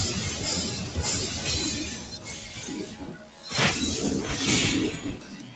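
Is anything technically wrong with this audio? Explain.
Yes, there is one fault. From 1.99 to 2.27 s, the noise suppressor cuts the sound: it treats the sound as noise and pulls the level down by about 4 dB. The waveform shows a shallow notch there, and the spectrogram shows a fainter patch.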